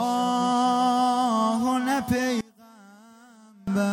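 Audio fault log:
2.41 to 3.68 s, one channel inverted: the sound suddenly drops by about 26 dB. Centred content and low end nearly disappear. What remains is faint. The likely cause is one stereo channel flipped in polarity. When the two channels are summed to mono, everything they share cancels, and only their difference survives.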